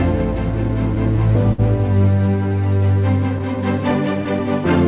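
Clock drift between sender and receiver runs through the whole clip. The sending clock is a few percent slower than the receiving one, so the receiver's buffer keeps draining and the playback has to stretch to keep going. This shows up as small, unevenly spaced timing hiccups across the clip. Unlike a single network dropout, these are spread throughout rather than clustered. The narrowband sound with nothing above 4 kHz fits a G.711 call codec.

From 0.68 to 1.60 s come repeated stalls (stutter). The buffer ran empty four times, and each time the receiver stretched the last sound to fill the wait. About 84 ms was filled in total, the longest gap was 55 ms, and nothing was lost. The effect is a dragging, catching stutter over roughly a tenth of that span. These are distinct hold-and-resume catches, not the smooth, even slowdown that steady drift correction would produce.

From 2.49 to 4.47 s there are repeated timing corrections. 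The receiver repeatedly inserts short pieces, all lengthening the sound, to keep pace with the slow sender. The stretch plays at about 97% speed and gains around 50 ms over those two seconds. What gives it away is the slightly sluggish, unsteady tempo with faint hiccups. There are no audible stops or faded-in holds like in the earlier stutter, and no pitch change, so it is not a resampling error.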